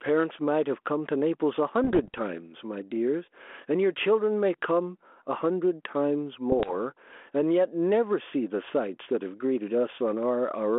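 A speech recording carried over a narrowband telephone-style path, band-limited to roughly 250 Hz to 3.4 kHz, with the light granular hiss of ADPCM coding that fits a 32 kbit/s G.726 link. Two faults affect it. Throughout, there is gain pumping, with a swing of roughly 10 dB. This is likely the result of the input gain being set far too high and a fast limiter or compressor clamping it down on each peak. On the waveform, the envelope looks flattened, with loud and quiet passages squeezed toward the same height. The second fault is bit errors on the ADPCM link, from 1.84 to 2.19 s and again from 6.52 to 6.75 s. Each corrupted bit knocks the decoder's step size and predictor off track, so instead of a single click you hear pops followed by rough, gritty bursts with brief jumps in level. The first burst is denser, which suggests an error rate of around half a percent, against a lighter fraction of a percent in the second. 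In the waveform, these show as sharp spikes with short ragged stretches of distorted amplitude. On a spectrogram, they appear as vertical broadband streaks across the whole 3.4 kHz band, smeared over a few milliseconds.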